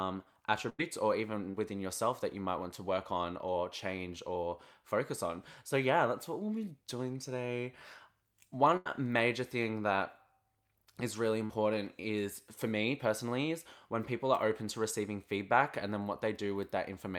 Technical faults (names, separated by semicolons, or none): burst of packet loss; short concealed packet loss